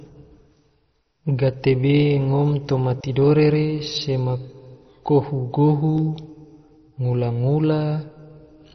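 Throughout, the speech has nothing above 6.1 kHz and heavy gurgling, granular distortion: likely MP2 compression at a very low bitrate, switching off upper sub-bands.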